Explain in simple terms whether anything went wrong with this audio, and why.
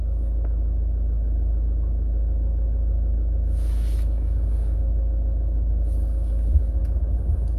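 Nothing went wrong; this sound has no audible faults.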